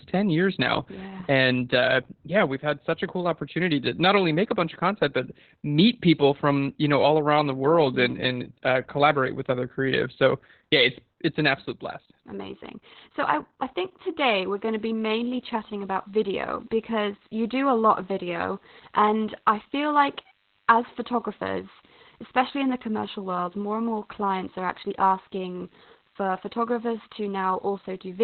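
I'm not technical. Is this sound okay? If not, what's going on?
No. Opus voice compression affects the whole recording. To save space, this speech was squeezed very hard by a voice codec that keeps only sounds below about 4 kHz and rebuilds the voice from a rough, simplified description every 20 milliseconds. That is why the speech sounds muffled and dull, like an old phone line, with a hoarse, slightly robotic edge and a loss of crispness in sounds like s and f.

DECT cordless phone buzz starts at 14.18 s, just after "I I think", and continues to the end. A cordless phone or its base station sitting close to the recording equipment sends a short radio pulse 100 times a second, and the audio circuitry turns those pulses into sound. The result is a faint, steady, thin buzz underneath the speech, with a slightly harsh, buzzy edge rather than a smooth hum.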